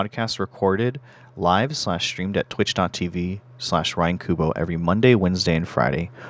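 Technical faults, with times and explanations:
0.14 to 3.05 s, automatic gain rising: the gain control judged the input too quiet and raised its gain by about 4 dB over nearly three seconds, so speech and background noise swell together. The waveform envelope widens steadily, and the spectrogram brightens evenly across all frequencies.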